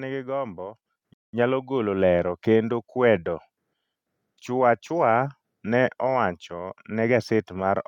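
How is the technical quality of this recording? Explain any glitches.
The recording has two glitches close together, both in the first second and a half.

At 1.02 s, the microphone volume stepped up. The call software judged the input too quiet and raised the device's input volume in a single jump of about 7 dB. The voice and the background noise both get louder at that instant, shortly before "nyalo golo lero kendo". It is heard as an abrupt change of level rather than a smooth swell.

From 1.14 s to 1.34 s comes a gap most likely caused by a Bluetooth stall. Interference would have delayed packets on the wireless link, so the headphones' buffer emptied and playback halted until the resent data arrived. The result is a clean drop to silence lasting about 200 ms, after which the sound resumes with "nyalo golo lero kendo".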